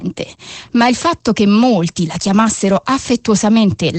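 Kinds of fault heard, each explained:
Opus voice compression: Across the whole clip the speech is coded by a linear-prediction voice coder working in wideband mode, so nothing survives above about 8.5 kHz, and the coarse excitation leaves the voice plainly hoarse and faintly robotic, a sound that fits roughly 12 kbps. Unlike a simple low-pass filter, which only dulls the top end, this fault also roughens the speech within the remaining band, where a filter would leave it clean.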